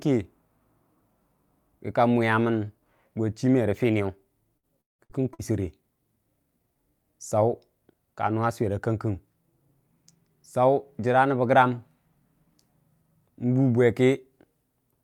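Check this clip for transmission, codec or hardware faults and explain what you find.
There is one transmission fault: a burst of repeated packet loss with a robotic sound, running from 4.57 to 5.53 s. Over that second the stream drops out four times, the longest hole lasting 176 ms. Each hole is patched by extending the last received sound, covering about 39% of the stretch. This produces choppy, robotic speech with fragments missing. A single dropout or plain noise would not do this. The smeared, repeated-tone quality of the concealment, recurring in quick succession, marks it as repeated loss.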